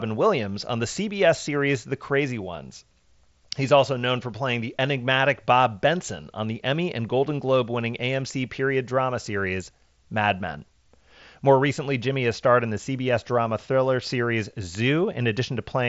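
Listening to this speech recording, nothing stood out as a technical problem; the only notable character is the wideband Bluetooth mSBC headset link, whose content stops at about 7.7 kHz.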